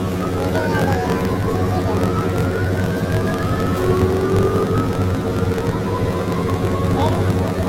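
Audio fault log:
throughout, planar audio read as interleaved: the sound is an octave high with a rough 45.9 Hz flutter. Each 21.77 ms block stores all left samples, then all right, but is read as alternating pairs, so it plays twice at double speed.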